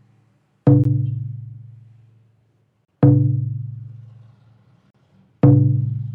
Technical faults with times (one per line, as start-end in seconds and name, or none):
0.84 gap between stream segments
2.85-2.88 gap between stream segments
4.90-4.94 gap between stream segments